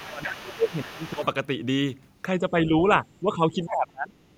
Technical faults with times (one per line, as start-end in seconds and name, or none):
0.00-1.26 other side's voice leaking through
0.07-1.25 speech suppressed in double talk
2.38-2.72 speech suppressed in double talk
3.21-4.19 speech suppressed in double talk